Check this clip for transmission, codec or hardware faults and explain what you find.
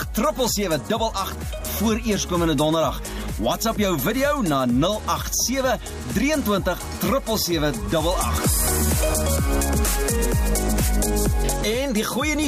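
No transmission, codec or hardware problems can be heard anywhere in the audio, and the signal stays continuous and stable throughout.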